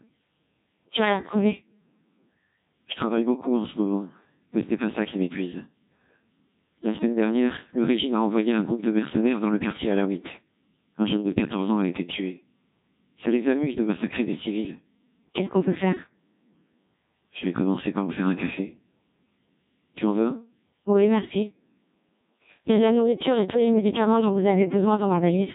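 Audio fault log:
throughout: Codec 2 vocoder. The speech is resynthesised from sine waves using only pitch, voicing and envelope, giving heavy robotic buzz that fits a 1.6 kbit/s mode. A spectrogram shows rigid, comb-like harmonics and nothing above 3.8 kHz.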